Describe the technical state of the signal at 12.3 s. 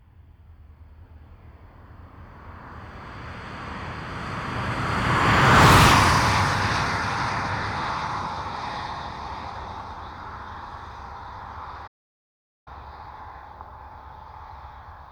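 Silence: the sound cuts off mid-flow from 11.87 to 12.68 s, about 0.79 s, a playback stall likely caused by the player running short of data or being blocked.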